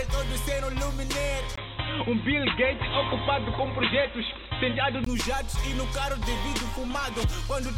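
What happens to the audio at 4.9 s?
At 4.9 s the audio is still in the dull, boxy stretch that runs from 1.56 s to 5.06 s, when the input was likely switched to a poorer device. That device passes nothing above 4 kHz and adds its own background noise, about 35 dB below the signal, with no change in loudness. A plain low-pass filter would not bring a new noise floor or the brief silence, about 20 ms, heard where the sound changes device.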